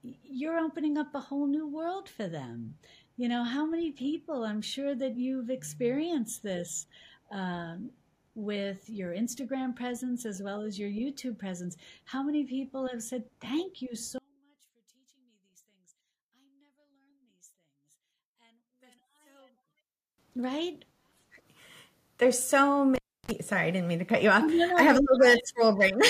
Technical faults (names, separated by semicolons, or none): one channel inverted; cable pulled and plugged in